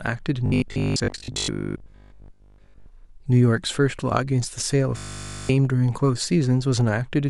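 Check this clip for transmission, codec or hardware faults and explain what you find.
There's robotic sound from repeated short buffers twice, from 0.46 to 2.88 s and again from 4.97 to 5.51 s. The speech becomes a rigid 50 Hz metallic buzz, which fits a 20 ms chunk being looped while most of the audio, and in the second stretch all of it, is skipped, likely from starved playback buffers.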